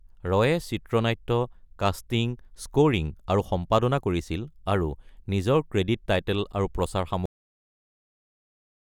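Speech clip with a cut-off end. At 7.26 s the audio stops partway through a sound and falls straight to digital silence, with no natural decay. The silence runs to the end. The final buffers were never written or played back.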